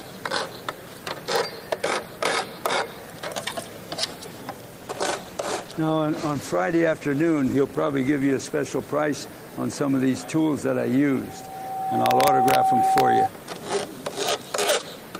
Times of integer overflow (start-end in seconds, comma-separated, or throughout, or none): 2.66, 12.06-12.55, 12.98-13.00, 14.29, 14.69